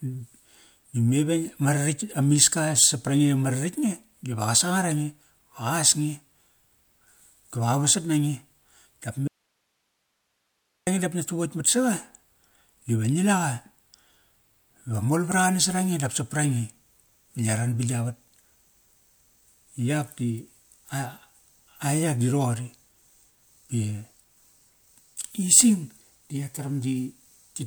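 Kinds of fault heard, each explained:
Audio dropout to a faint residue: The speech cuts off abruptly at 9.28 s and returns at 10.87 s, just before "dap ngia". For 1.59 s only a faint hiss remains, roughly 50 dB down. The likely cause is a lost signal on a path that stayed live.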